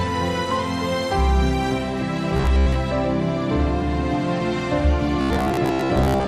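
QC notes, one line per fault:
2.37–2.80 s and 5.21–6.27 s: robotic sound from repeated short buffers. A rigid metallic buzz at 66.8 Hz fits a roughly 15 ms chunk being looped, likely because new data arrived too seldom; about half, then about 70%, is repetition.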